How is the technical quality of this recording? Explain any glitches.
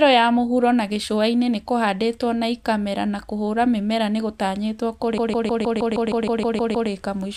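The recording has one clear glitch, a stretch of repeated frames from 5.18 to 6.90 s. A block of about 157 ms, which fits a run of roughly six compressed frames, was delivered more than once, so the decoder played it eleven extra times and added about 1.72 s to the speech. It sounds like a rapid mechanical stutter. On a spectrogram, an identical 157 ms pattern tiles across that span. The waveform shows the same repeating envelope.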